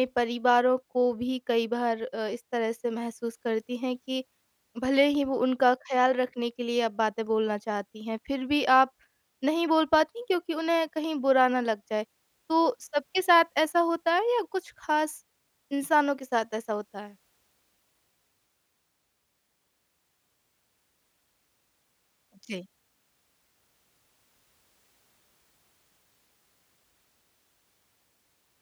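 No technical faults can be heard anywhere in the recording.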